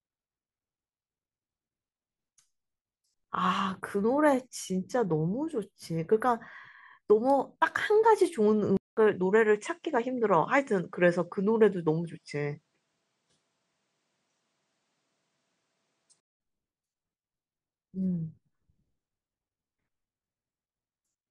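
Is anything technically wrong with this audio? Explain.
Yes. From 8.77 s to 16.40 s the input likely switched to a poorer device. After a 200 ms gap, the speech loses all content above 9.7 kHz and sounds duller, with a faint new background noise. Level stays roughly unchanged, and clarity returns at 16.40 s.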